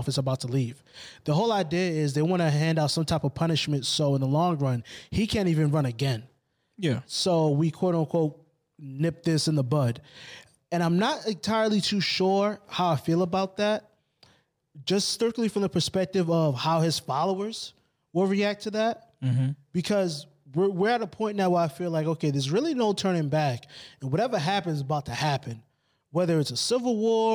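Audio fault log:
Throughout, crude rate conversion: the speech was moved to a new rate by linear interpolation without filtering, which fits a 32 kHz to 44.1 kHz change. An inharmonic fizz, roughly 30 dB down, rides loud and sibilant moments. A spectrogram shows faint mirrored images above 16 kHz.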